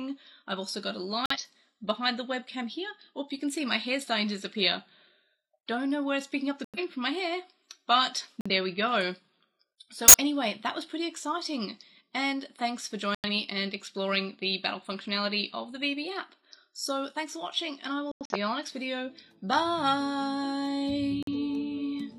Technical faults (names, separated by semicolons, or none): corrupt frame muted; corrupt frame decoded